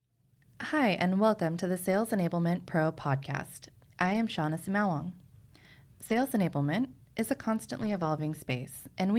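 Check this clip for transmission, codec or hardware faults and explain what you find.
The speech has one fault type: lost packets rebuilt from error correction, at 1.91–1.93, 4.01–4.15, 6.05–6.23 and 7.81–8.03 s. Later packets carried low-bitrate copies that the decoder played, so there's no gap. The 20, 80, 100 and 120 ms stretches sound rougher and noisier.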